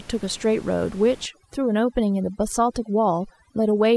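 From 1.26 s to the end of the clip, overdone noise removal takes hold. The room noise, about 24 dB below the speech before that point, drops and breaks up into twinkling specks. The reduction is set too strong: frequency bands close to its noise estimate are pushed down or switched off one by one, and quieter parts of the voice are removed with them. A noise gate would instead mute the whole signal at once, without that sparkling, band-by-band residue.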